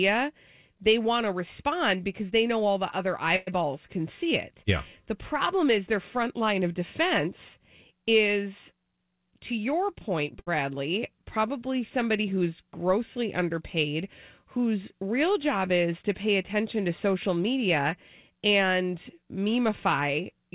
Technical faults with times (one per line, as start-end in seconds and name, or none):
3.36-3.49 call audio freeze
9.04-10.33 jitter buffer speed-up
10.39-10.48 short stall from a late packet
17.36-17.85 jitter buffer speed-up
18.30-18.83 jitter buffer speed-up